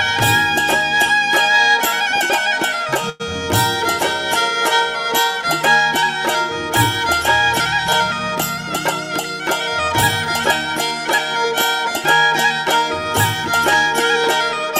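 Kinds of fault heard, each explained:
Call audio freeze: from 3.09 to 3.22 s the sound stalls, with the last moment drawn out as a fading buzz for about 103 ms rather than dropping to silence. Nothing is skipped. When the flow resumes it carries on from exactly where it stopped, so everything after that point arrives about 103 ms later. The likely cause is packets held up in transit, leaving the jitter buffer empty until they caught up.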